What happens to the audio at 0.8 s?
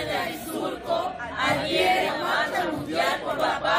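Nothing goes wrong at 0.8 s; the audio plays through that moment cleanly, with no dropout, click or distortion.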